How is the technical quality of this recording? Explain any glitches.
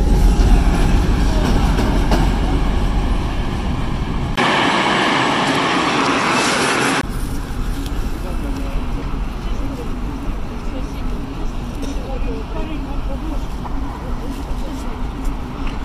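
The recording has one glitch. From 4.36 to 7.03 s, after a 20 ms gap, the sound turns duller, with nothing above 11.4 kHz, a noticeable level shift and faint new background noise. The likely cause is the input switching to a poorer device. The new tone and noise floor set it apart from a plain filter change.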